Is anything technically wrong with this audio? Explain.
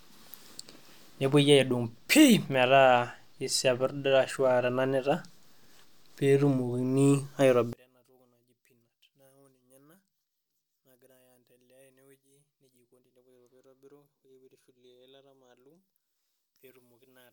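Yes. From 7.73 s to the end, the speech almost disappears, dropping by about 34 dB. The likely cause is one channel inverted: one side of the stereo pair has flipped polarity, so when the two are summed to mono, everything common to both channels cancels. Centred speech is exactly that shared content, so it collapses, leaving only a faint residue made of whatever small differences existed between the channels.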